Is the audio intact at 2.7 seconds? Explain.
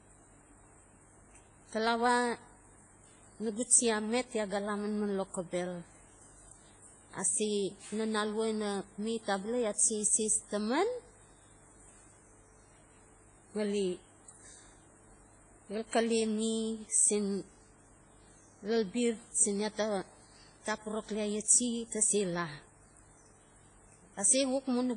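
No. The speech has a washy, ringing quality throughout, likely from heavy WMA compression. Nothing above 10.1 kHz survives, which fits a bitrate around 24 kbps.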